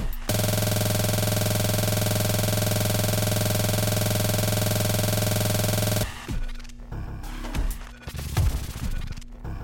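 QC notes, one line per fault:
Throughout: mains hum. A steady 60 Hz tone sits under the audio at about 20 dB below the signal, with some low harmonics stacked above it. This is power-line energy leaking into the signal path, typically through a ground loop between connected equipment or magnetic pickup from a nearby transformer. Because the interference is locked to the supply frequency, it never drifts or fades. It stays a constant drone beneath everything else in the clip.
0.34–6.03 s: system hang loop. The same 46.44 ms slice of audio repeats back to back for nearly six seconds, producing a rough, buzzing stutter at 21.5 Hz instead of moving sound. The host stalled while the audio hardware kept replaying the last filled section of its ring buffer. The loop length fits a 2048-sample buffer. At this rate, the repeats sit between a pitched buzz and a rapid machine-gun rattle.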